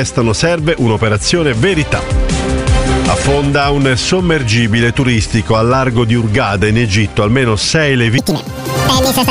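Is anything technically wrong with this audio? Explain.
Yes. From 8.18 s to the end, a wrong sample rate fault plays the sound at twice its recorded speed, which fits 22 kHz material played at 44.1 kHz. It jumps a full octave (12 semitones) and rushes. Spectrogram harmonics shift upward, spaced twice as widely, and waveform cycles squeeze to half their width.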